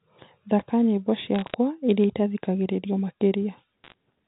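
From 1.35 to 1.54 s and again from 3.84 to 3.94 s, bit errors on a digital phone line corrupt individual A-law samples, producing sharp ticks and crackle over intact speech. The second burst is denser, with roughly twice the error rate.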